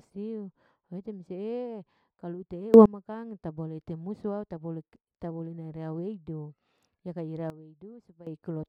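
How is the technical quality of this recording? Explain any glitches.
The recording has two level glitches, both sudden gain jumps. At 2.74 s the level leaps up by about 24 dB for roughly a tenth of a second, and from 7.5 to 8.27 s it drops by about 15 dB. Each is likely a gain setting applied instantly with no ramp, so the speech and the background noise step together, with an abrupt edge at each change.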